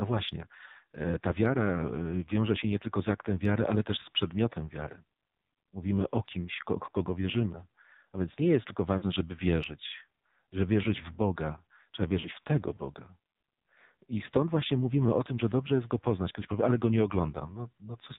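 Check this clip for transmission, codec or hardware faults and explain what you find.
Two faults are present: heavy narrowband mobile coding throughout, and two short bursts of lost frames.

AMR narrowband mobile codec, throughout: the speech is band-limited to 4 kHz and rebuilt from a vocal-tract model with sparse pulse excitation. The damage is heavy, with a buzzy, synthetic edge that fits the low 5.9 kbps mode.

Lost AMR speech frames, at 8.98–9.06 s and 12.20–12.28 s: each gap lasts about 40 ms, consistent with two consecutive frames failing their checksum. The decoder extrapolates the last pitch and spectral settings at reduced gain, producing a brief warbling dip. The first falls after "więc nie jest tylko" and before "żeby wierzyć że wierzyć". The second comes just before "w tego".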